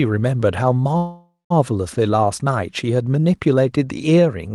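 Speech clip with a call audio freeze from 0.97 to 1.52 s. The sound smears into a fading buzz, then about 0.17 s of silence. Speech resumes intact, about 0.53 s later, likely from a starved jitter buffer.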